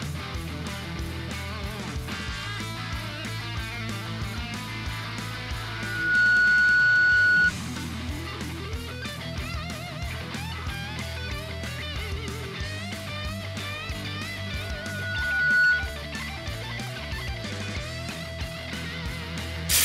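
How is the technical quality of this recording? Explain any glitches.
The recording is marred by two bursts of loudspeaker feedback squeal. The first runs from 5.62 to 7.52 s and swells up in about half a second. The second runs from 14.47 to 16.02 s and takes around a second to build. Both sit on a steady 1.5 kHz tone that ends up roughly 15 dB above the rest of the sound. The mic is hearing its own speaker, and at 1.5 kHz the loop gain tips past one, so that tone keeps feeding itself until the loop is broken.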